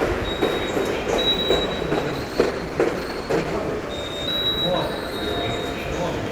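From 1.97 s to 5.96 s a call bitrate drop starves the encoder of bits. The sound turns coarse, watery and muffled as high frequencies vanish, bottoming out for about 1.65 s, which fits a fall from roughly 64 kbps to 14 kbps.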